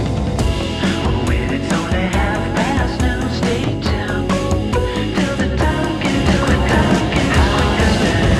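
From 6.14 s to the end, everything is heard twice: a second copy at roughly the same level trails about a second behind, cutting in abruptly with no decay or room colour. This doubled audio track is likely a second capture arriving through a slower path.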